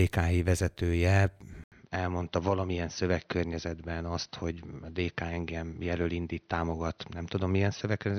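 At 1.64 s the speech cuts out for 80 ms, then returns duller, slightly quieter, capped at 6.1 kHz and over a faint new noise, likely an input switched to a poorer device.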